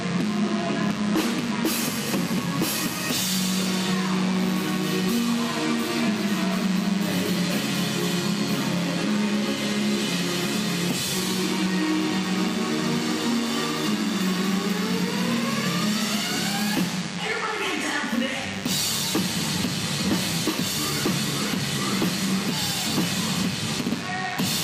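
From start to finish, DECT cordless phone buzz sits under the sound at roughly 15 dB below the signal. A nearby DECT handset or base transmits a brief radio burst every 10 ms, and the audio circuit rectifies it, giving a continuous 100 Hz buzz rich in harmonics.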